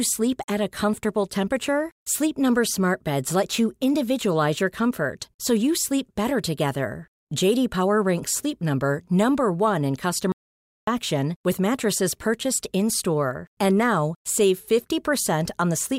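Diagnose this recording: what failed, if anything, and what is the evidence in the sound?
An audio dropout to silence hits the speech from 10.32 to 10.87 s, cutting about 0.55 s before "with mattresses purchased". The waveform flatlines to silence, and the spectrogram shows a blank band with no room tone. That points likely to a lost input link while the recorder kept writing silence.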